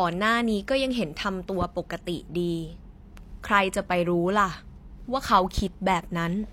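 At 1.62 to 1.65 s and again at 5.58 to 5.61 s, a loud pop, a single sharp thump peaking roughly 10 dB above the speech, sits on top of the talker, who carries on underneath. A voltage spike from a switch or static discharge is the likely cause.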